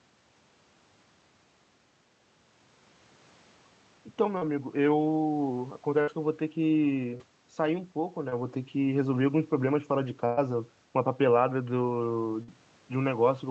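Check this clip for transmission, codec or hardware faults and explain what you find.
Six packet-loss events disrupt the speech, of two kinds.

Short concealed packet loss at 4.37–4.43 s, 7.17–7.22 s and 8.30–8.34 s: roughly 40, 20 and 20 ms of audio missed the decoder, so the receiver extended the preceding sound across each hole and blended back, leaving a brief smear or wobble.

Burst of packet loss at 6.01–6.09 s, 10.26–10.39 s and 12.43–12.50 s: consecutive packets, about 60, 120 and 40 ms, were lost. The receiver stretched the last sound while fading it, a held buzz or dying hiss, with no silent gap at 10.26 s, then resumed with that stretch gone.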